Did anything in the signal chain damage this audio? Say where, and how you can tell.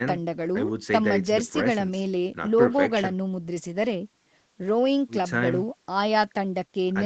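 No, nothing in the signal chain damaged this audio.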